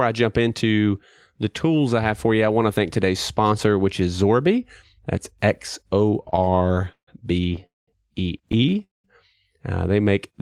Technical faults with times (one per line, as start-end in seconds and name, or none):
6.23-7.09 repeated stalls (stutter)
7.49-7.64 repeated stalls (stutter)
7.66-7.89 call audio freeze
8.49-9.06 repeated stalls (stutter)